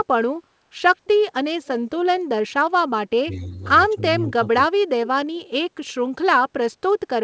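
A speech recording from a wideband call, with band-limited sound topping out around 8 kHz, carries two kinds of fault. From 1.65 to 1.99 s there is an echo leak: a faint, separate copy of the talker arrives about 223 ms late and sits well below the direct sound, roughly 25 dB down. It is likely that a loudspeaker on the far end fed the microphone and the echo canceller let the remainder through. Unlike room reverberation, which smears into a smooth decaying tail, this is a distinct delayed repeat. Then comes speech suppressed in double talk at 3.25 to 3.6 s, 3.93 to 4.02 s and 4.74 to 4.81 s. The talker's level dips by roughly 10, 15 and 20 dB respectively, over a few hundred milliseconds in all, while the other side is speaking. The echo canceller, likely unable to tell the talker from its own loudspeaker echo, pulled both down. These are gain dips rather than the abrupt silent gaps of packet loss.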